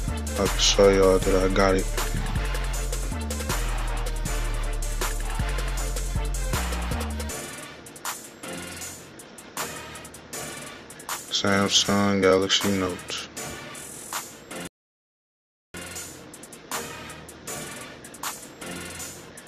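At 14.67 s the sound stops dead for about 1.07 s, a rebuffering stall. Playback ran dry waiting for data, then resumed exactly where it left off.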